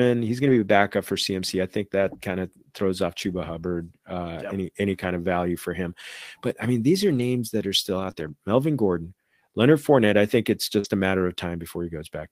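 At 0.43 to 0.57 s the sound turns briefly rough and grainy. This is a lost packet rebuilt from error correction. Similar patches follow at 2.09 to 2.15 s, at 5.01 to 5.07 s between "uh yep any any" and "of value for him", and at 7.07 to 7.21 s. Another comes at 7.99 to 8.09 s after "that are still", then 8.15 to 8.29 s, and a last one at 10.84 to 10.86 s. Each stretch, 20 to 80 ms long, plays from a low-bitrate backup copy carried in the next packet. So nothing drops out, but the detail thins and noise creeps in.

At 8.11 to 8.15 s, also after "that are still", there is short concealed packet loss. About 20 ms never arrived. The decoder stretched the preceding sound to cover it. The result is a quick smear before the rebuilt audio resumes.

At 10.79 to 10.86 s a burst of packet loss occurs. About 47 ms is filled by continuing and fading the last sound. It comes across as a brief held buzz or hiss. 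About 40 ms of real audio is skipped, and playback picks up further on.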